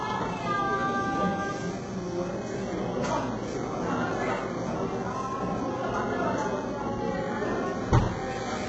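From start to finish the audio carries heavy damage of the kind HE-AAC compression leaves, likely at a very low bitrate around 8 kbps. Nothing reaches above 8 kHz, yet the upper range is still filled in, because the treble is rebuilt from copied lower bands instead of being coded. Those copied bands don't line up with the real harmonics, so bright sounds turn gritty and metallic. A plain low-pass filter, by contrast, would leave the top muffled and clean.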